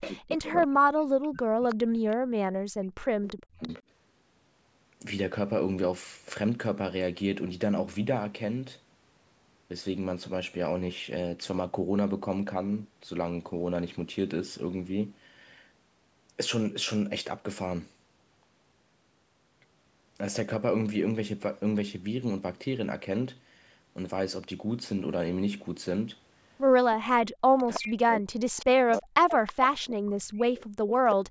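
From 0.0 to 3.7 s the speech is suppressed in double talk. It sinks by around 40 dB, affecting about three seconds in all. Both ends were likely talking at once, and the echo canceller turned everything down.

Echo leak overlaps it at 0.01 to 0.63 s, 1.69 to 2.16 s and 3.23 to 3.82 s. A faint copy trails 326 ms behind, about 15 dB below the speech, then about 25 dB. A loudspeaker echo has likely slipped past the canceller.

From 26.95 to 30.98 s the same double-talk suppression returns. The speech dips deeply again.

Echo leak comes back at 27.58 to 29.85 s and briefly at 31.09 s. The 326 ms echo is stronger here, only about 10 dB below the speech.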